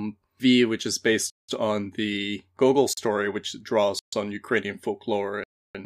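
The speech stream drops out four times as blocks of samples are replaced by zeros, a block of digital silence each time, most likely from output buffers not being filled in time. From 1.30 to 1.49 s, between "which is" and "on the", a 186 ms hole (fitting an 8192-sample buffer) opens; then 38 ms at 2.93 s, 135 ms at 3.99 s and 309 ms at 5.44 s. Each is a hard cut out and back with no fade.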